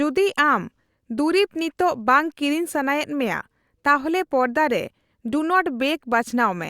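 No technical faults can be heard in this recording.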